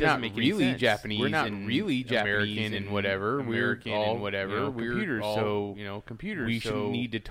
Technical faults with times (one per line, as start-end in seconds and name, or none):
0.00-7.30 doubled audio track